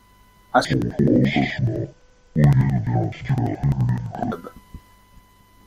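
From 0.65 s to 4.35 s the speech drops an octave, sounding doubled and choppy: interleaved audio read as planar. Alternating left-right samples in 85.33 ms blocks (fitting 4096-sample blocks) are split into halves played together at half speed, so pace holds, unlike a slowed playback, with an 11.7 Hz chop.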